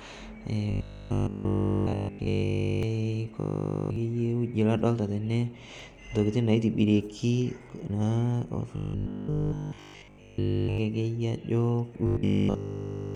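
From 0.71 to 2.83 s, 3.40 to 3.96 s, 8.76 to 10.78 s and 12.07 to 13.15 s, the speech collapses into a rigid, metallic 50 Hz buzz that only loosely tracks the words. This robotic sound from repeated short buffers likely comes from audio arriving too seldom, so a 20 ms slice is looped in place of nearly all of the real signal, and that loop length imposes the fixed 50 Hz pitch.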